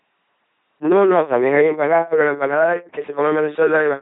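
From start to finish the speech has been through an LPC-10 vocoder, and the damage is heavy. At 2.4 kbit/s the coder keeps only a short filter model of the vocal tract and drives it with either a buzzing pulse train or noise. Each frame is treated as fully voiced or fully unvoiced, so the voice comes out mechanical and robotic, with stray buzz or hiss wherever that choice is wrong. Nothing is present above 3.8 kHz.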